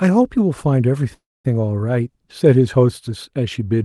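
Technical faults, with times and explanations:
1.14 to 1.45 s, call audio freeze: the sound stalls, the last moment is drawn out into a brief fading buzz that sinks to near silence for about a quarter of a second, then the audio resumes exactly where it broke off, likely because packets were delayed and the jitter buffer ran dry. Unlike a dropout, nothing is lost. The roughly 0.3 s pause is inserted, so everything after it arrives that much later. The surrounding Opus call audio keeps its usual band limit near 12 kHz.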